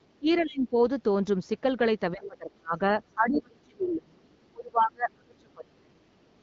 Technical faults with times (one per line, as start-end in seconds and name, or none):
0.19-0.74 speech suppressed in double talk
0.38-0.42 other side's voice leaking through
2.12-6.10 speech suppressed in double talk
2.23-2.27 other side's voice leaking through